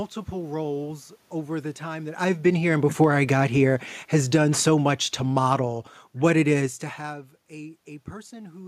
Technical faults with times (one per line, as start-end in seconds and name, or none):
2.31-6.77 automatic gain falling